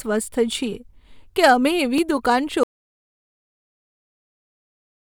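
At 0.51 s and again at 1.98 s, just after "કે અમે", a single sharp click marks dropped samples, likely under a millisecond of the stream skipped. The waveform jumps abruptly from one level to another, and a spectrogram shows a thin vertical line spanning all frequencies.

From 2.63 s to the end of the speech, an audio dropout to silence cuts the sound off mid-flow, likely because the input signal was lost while recording continued. The waveform drops to a flat line and the spectrogram goes blank, with no room tone remaining.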